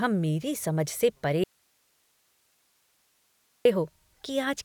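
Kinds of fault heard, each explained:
Audio dropout to a faint residue: after "मेरी समझ से परे" at 1.44 s the speech snaps out for 2.2 s, leaving faint hiss, likely a signal lost upstream.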